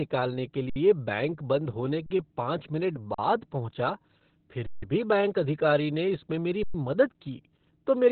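From the start, the speech carries heavy Opus voice compression. Nothing is present above about 4.4 kHz, and the band is limited to narrowband, which fits the SILK coder running at a very low rate, around 8 kbps. Coarse coding of the excitation leaves the speech muffled, hoarse and faintly robotic throughout.

Five underruns with a held sample follow, at 0.70–0.76 s (64 ms), 2.06–2.10 s (40 ms), 3.14–3.18 s (40 ms), 4.66–4.82 s (160 ms) and 6.63–6.74 s (110 ms). Each time the output buffer ran dry, so the converter froze on its last value and the sound stopped dead with little or no click. Playback then resumed where it had stopped rather than jumping ahead, so each gap closes gently and no speech appears to be missing.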